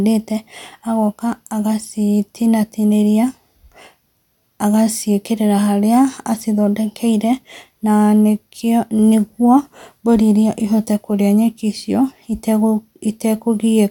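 No technical faults can be heard anywhere in this speech recording. There is nothing to place in time or trace to a cause.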